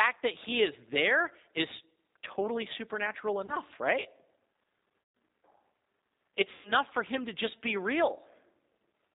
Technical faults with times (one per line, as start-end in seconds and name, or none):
0.00-9.15 G.729 codec
3.46-3.56 VoIP packet loss concealed by the speech codec
5.02-5.15 VoIP packet loss concealed by the speech codec
6.52-6.73 VoIP packet loss concealed by the speech codec